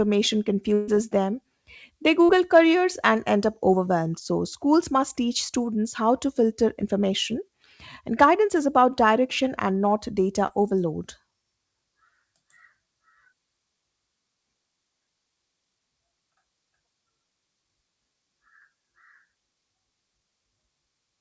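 At 0.74 to 0.89 s comes a burst of packet loss: about 140 ms of the call went missing, and the receiver covered roughly 134 ms of it by stretching the last sound and letting it fade. The result is a held buzz or dying hiss with no silence, and when the audio returns it has skipped ahead. What marks it as a burst rather than a brief concealment is its length: long enough to hear the fill decay and material vanish.

Short concealed packet loss occurs at 2.25 to 2.31 s, where about 40 ms failed to arrive and roughly 32 ms was synthesised from the preceding sound, and again at 10.47 s, a 20 ms gap patched with about 18 ms of fill. Each is heard as a momentary smear or wobble before the real audio blends back in. Unlike the burst, nothing audibly fades and the timeline barely jumps. The band stops at 8 kHz throughout, which fits a wideband call codec such as G.722.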